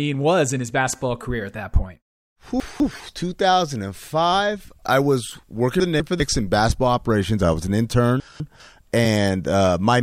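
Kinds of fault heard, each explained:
Chunks out of order: the audio was handled in 200 ms blocks, and three times a block was delivered one slot late, so it played after the block meant to follow it. Nothing is missing, but the speech in each 0.4 s span comes out swapped, with hard joins where the misplaced pieces meet. The jumbled moments fall at 2.6 to 3.0 s, 5.8 to 6.2 s and 8.2 to 8.6 s.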